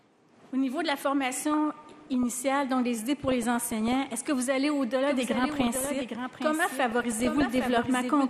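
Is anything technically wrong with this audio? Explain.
Yes. Throughout, the audio sounds dull and granular, with a gurgling edge. This is likely MP2 compression at a low rate, around 80 kbps, which switches off upper sub-bands and coarsely quantises the rest.

DAB burbling occurs at 1.35–2.36 s, 3.28–4.28 s, 5.32–6.02 s and 6.90–7.87 s. Bit errors slip past error correction and put short blips of noise in single sub-bands, while corrupted scale factors make sub-bands jump in level.

From 5.07 s to the end, a doubled audio track runs about 0.7 s behind, about 5 dB quieter. It starts abruptly and has no decay or room colour. It is likely a second, slower capture of the same audio.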